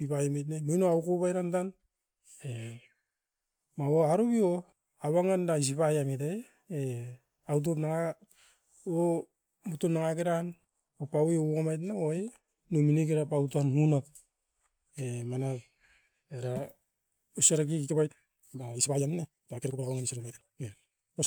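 A time-stretched section runs from 17.80 s to the end of the clip at 21.27 s, where the speech suddenly moves at about 1.8 times its earlier pace while the pitch stays where it was. The likely cause is software squeezing this stretch to fit a shorter length, dropping short slices of the audio to keep the pitch steady. That removal leaves the passage rushed.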